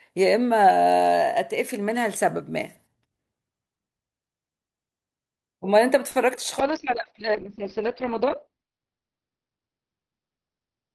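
A speech recording carries three network faults packed into about half a second, the last of which lasts to the end. From 6.11 to 6.17 s there is a short stall from a late packet. The sound is held for about 40 ms with a slight buzz or dip while the jitter buffer sits empty, and then it resumes exactly where it stopped, so nothing is skipped. Playback simply runs about 40 ms later from there on. Shortly after, from 6.35 to 6.39 s, a short concealed packet loss is heard as a brief smear or wobble. About 20 ms of real audio never arrived, and the decoder papered over the gap by extending the preceding sound before blending back in. Unlike the stall, something is actually lost here rather than delayed. From 6.6 s onward a call bitrate drop takes over. The encoder falls from 64 kbps to 7 kbps, with the bottom rate held for about 1.55 s, and the coded bandwidth shrinks from 20 kHz to 6 kHz. 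The speech therefore turns dull and muffled, with a rough, watery texture. What separates this from the two glitches before it is that it is a sustained loss of clarity and brightness across the rest of the clip, not a momentary hold or gap.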